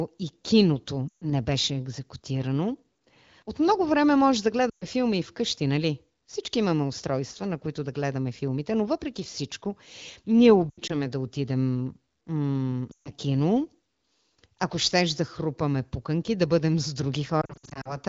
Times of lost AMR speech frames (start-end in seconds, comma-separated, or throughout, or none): 1.08-1.25, 4.70-4.85, 10.69-10.95, 12.91-13.10, 17.41-17.97